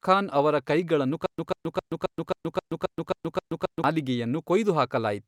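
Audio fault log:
1.26–3.84 s, stutter with silent gaps: right after "ಖಾನ್ ಅವರ ಕೈಗಳನ್ನು" the speech locks into a loop, a chunk of about 141 ms repeating nine times with roughly 125 ms of dead digital silence after each, so it ticks along at a steady 266 ms rhythm. That's likely a stalled stream or player replaying its last buffered fragment on every retry and then running dry, and whatever should have played across those 2.6 s is simply gone.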